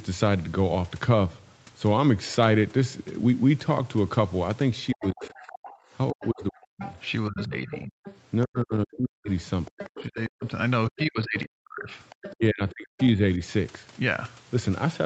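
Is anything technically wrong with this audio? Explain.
Yes. From 4.9 to 13.07 s a second, fainter voice runs underneath the speech, roughly 15 dB below it. This is the other side's voice leaking through, likely from the far end playing on the talker's loudspeaker and reaching the microphone because the echo canceller left part of it behind.

Over nearly the same stretch, 4.93 to 13.4 s, the talker's speech keeps dipping and breaking into pieces, for about four seconds in total, at worst dropping by roughly 40 dB. This is the likely result of speech suppressed in double talk: with both sides speaking at once, the canceller could not tell the talker from the echo and attenuated everything.

Between 5.76 and 5.83 s the room sound briefly drops out by about 21 dB for 70 ms, then returns. This is background gated by the echo canceller, which clamped the microphone down hard while the loudspeaker was active and then released it.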